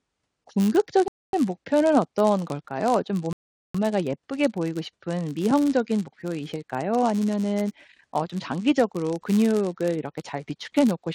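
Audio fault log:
Throughout: filter restarted on every block. A steady 100 Hz buzz sits under the speech and swells and fades with its level, louder on strong syllables and gone in the pauses. Some filter in the chain is dropping its memory at each block boundary and starting again from silence, so every block opens with a tiny transient. Those ticks arrive every 10 ms, which points to blocks of about that length, and at that rate they fuse into a buzz instead of separate clicks.
1.08–1.33 s and 3.33–3.75 s: rebuffering stall. Twice the speech cuts to dead silence and then picks up exactly where it left off, with nothing skipped. The player ran dry of downloaded audio and simply waited for more to arrive before carrying on. The first gap adds about 0.25 s and the second about 0.42 s. Because no audio is lost, the pauses sound like awkward hesitations rather than dropouts, and the clip ends up longer than it should be.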